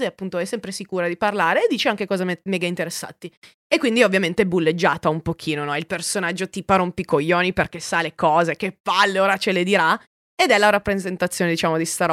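No technical fault can be heard anywhere in the recorded speech, with the signal continuous and intact throughout.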